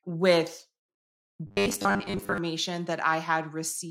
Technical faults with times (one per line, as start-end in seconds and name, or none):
1.47-2.38 robotic sound from repeated short buffers